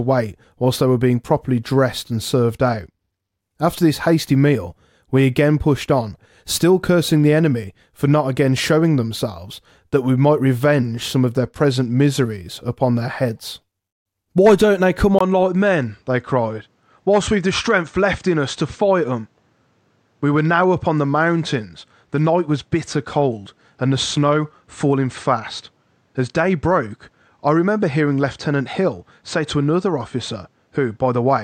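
Bluetooth SBC bit pool drop at 2.53 to 3.40 s, after "being properly dressed and", and again at 11.39 to 12.42 s, between "might revenge some of" and "upon their heads". A congested link forced the encoder to spend fewer bits, so the treble dulls and gritty noise rises. That fits a cut from bit pool 28 to about 13, near 102 kbps.

Input switched to a poorer device at 15.19 s, after "don't they come". A 20 ms gap is followed by sound about 5 dB quieter, with nothing above 8.6 kHz and a new noise floor roughly 45 dB down, lasting to the end. The likely cause is a change to a lesser microphone or headset profile.

The same bit pool drop returns at 21.05 to 24.68 s, dulling and roughening that stretch further.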